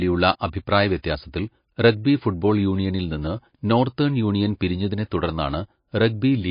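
Watery, swirling speech runs through the whole recording, with the treble gone entirely above about 5.1 kHz and s sounds turning into metallic chirps as detail flickers in and out from moment to moment. That points to heavy MP3 compression, likely at a low bitrate in the region of 28 kbps. Short of bits, the encoder cuts the top band at a fixed frequency and drops quieter frequency components from frame to frame, so consonant onsets smear.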